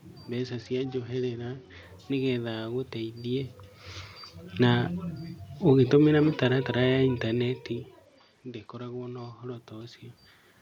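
From 0.38 to 1.83 s, just before "nĩgetha agũteithie", a Bluetooth SBC bit pool drop dulls the treble and adds grit. This fits a pool falling from 28 to 9, near 78 kbps, with the spectrogram's upper bands emptying. From 5.68 to 7.59 s the automatic gain falls by about 3 dB, and the waveform envelope and background sink together. The same bit pool drop returns from 8.06 to 9.56 s, again cutting the top bands.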